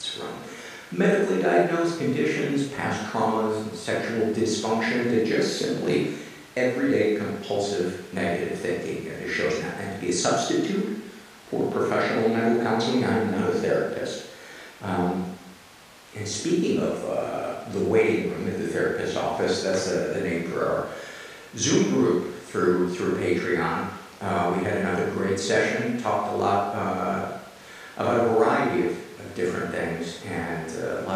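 No technical faults can be heard anywhere in the recording.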